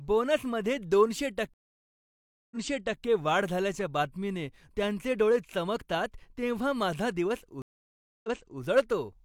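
A stream reconnect breaks the speech at 1.54 s, leaving 975 ms of silence before the audio resumes about 0.51 s earlier than where it stopped, ending at 3.02 s. A second reconnect at 7.62 s leaves 618 ms of silence, resumes 0.37 s back, and ends at 8.61 s. Each time the connection dropped and a fresh decoder picked the stream up mid-flow. Unlike a plain dropout, the speech doesn't simply continue after the gap: the server resent a burst, so a short stretch is heard twice.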